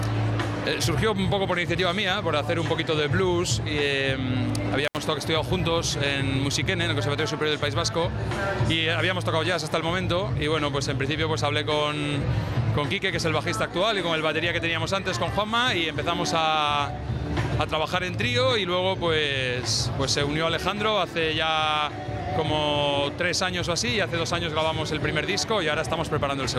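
At 4.85 s the sound drops out briefly. This is an intermittent contact. A loose cable or plug lost its connection for a moment, then made it again. The whole event runs to 4.97 s, and the line is fully open for about 71 ms of that. Crackle marks the break and the return, as the contact scrapes open and closed. In the gap, the sound vanishes and faint hiss remains.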